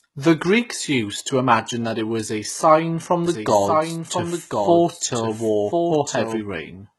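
HE-AAC compression runs through the whole clip, from 0 s to the end. The treble has the bright but synthetic quality of spectral band replication. The upper band is rebuilt by copying lower speech bands upward instead of being coded directly, so its harmonics fail to line up with the ones below. S sounds come out gritty and lispy, nothing reaches above 11.8 kHz, and the damage is heavy, which fits a low-rate stream of around 16 kbps, likely HE-AAC.

A doubled audio track starts at 3.26 s, right after "was a sign from", and stops at 6.40 s. A second full-band copy of the speech trails the original by about one second at roughly 5 dB lower. It carries no decay or room colour and switches on and off abruptly at those points, which likely means the same signal was captured twice through paths of different delay.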